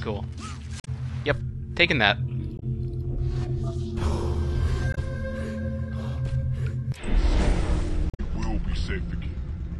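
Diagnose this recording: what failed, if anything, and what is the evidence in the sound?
Damaged data in the compressed stream, a codec-stage fault, is heard as four short glitches at 0.80–0.88 s, 2.56–2.63 s, 4.91–4.98 s and 8.10–8.20 s. The decoder misreads corrupted frames and resynchronises on the next frame header, which is different from the plain gap left by dropped packets.

A section at the wrong speed runs from 6.99 s to the end. It plays at 0.824 times normal speed, about three semitones lower. Pitch and tempo fall together, so this is not a pitch-shift effect. The likely cause is an editor or player applying the wrong clock to that section.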